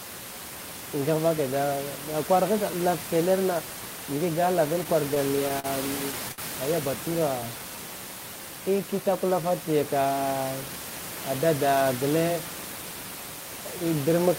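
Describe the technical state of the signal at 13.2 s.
At 13.2 s the speech signal is intact, with only the room's own background noise sitting about 10 dB below the voice.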